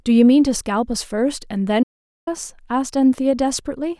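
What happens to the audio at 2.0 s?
At 2.0 s the speech is inside an audio dropout to silence running from 1.83 to 2.27 s. The input feed was likely lost for that stretch, through a disconnected source, a broken link or an accidental mute, while recording carried on writing silence. The speech cuts off abruptly, leaves about 0.44 s of total silence with no room tone at all, then resumes mid-flow. Whatever was spoken in that gap is gone.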